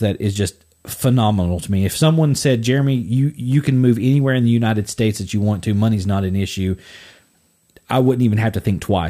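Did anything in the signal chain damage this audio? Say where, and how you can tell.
Yes. USB whine runs throughout the speech: a fixed-pitch tone at 8 kHz, strongest at its 16 kHz harmonic, roughly 40 dB below the speech. That pitch matches USB's 125-microsecond microframe rate, whose current draw is leaking into the analogue wiring through shared power or ground.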